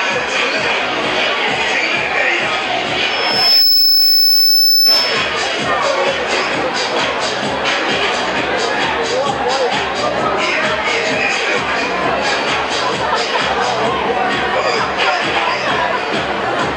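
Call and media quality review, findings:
Loudspeaker feedback squeal, 3.10–5.33 s. Steady 5.3 kHz tone swells over about half a second, settling around 5 dB above the programme. Mic hearing its own speaker; loop gain above unity at 5.3 kHz, self-sustaining until loop broken.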